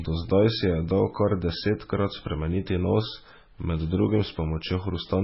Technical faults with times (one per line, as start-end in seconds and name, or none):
0.00-5.23 MP3 compression